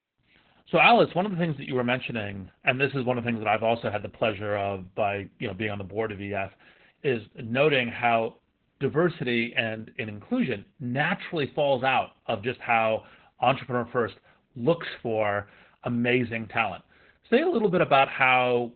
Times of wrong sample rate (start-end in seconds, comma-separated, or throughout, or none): none